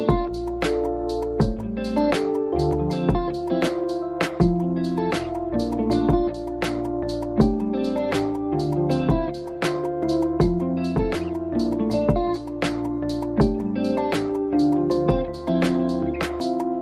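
No technical faults can be heard anywhere in the clip. Nothing in the audio points to a problem in how it was captured, processed or delivered.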